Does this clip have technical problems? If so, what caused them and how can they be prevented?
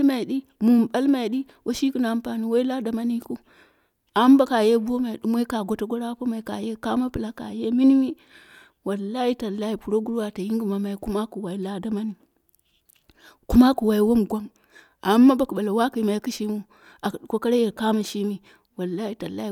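No, there are no technical faults audible in this speech clip, so there is nothing to trace or prevent.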